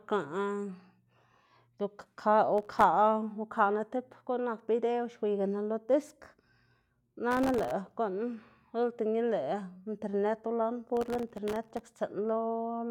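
Processor overload crackle breaks the speech at 2.58–2.83 s, 7.31–7.71 s and 10.97–12.01 s. Dozens of tiny buffers, each under a millisecond, miss their deadline and drop to silence, giving gritty tearing. The waveform shows hard-edged dropouts; a spectrogram shows broadband vertical streaks.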